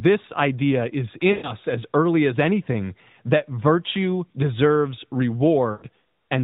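At 1.32 to 1.53 s, between "idea is" and "as early as anything", and again at 5.72 to 5.84 s, lost AMR speech frames: the decoder stretches the last good voice sound with falling gain, so it smears and fades rather than cutting to hard silence.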